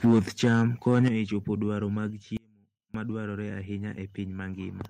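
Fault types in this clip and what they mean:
Microphone overload: the speech peaks hit the converter ceiling from 0.04 to 1.08 s, running about 5 dB over, most likely from input gain set too high, giving a crackly, flattened edge.
Microphone volume stepped down: the level drops abruptly three times, by about 2 dB at 0.06 s, about 7 dB at 1.08 s and about 3 dB at 2.1 s, likely automatic gain correction.
Audio dropout to a faint residue: from 2.37 to 2.94 s the speech suddenly vanishes for 0.57 s, leaving only a faint trace about 30 dB down, likely a brief signal loss.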